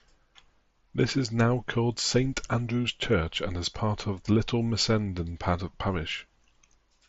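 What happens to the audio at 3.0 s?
Nothing goes wrong at 3.0 s: the speech runs on intact through that moment, carried over the Bluetooth mSBC headset link with only that codec's usual light coding texture.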